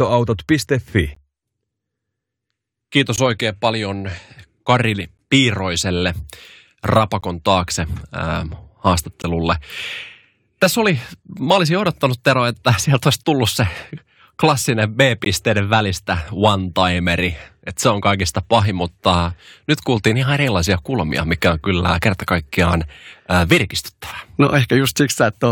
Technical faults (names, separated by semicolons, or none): gap between stream segments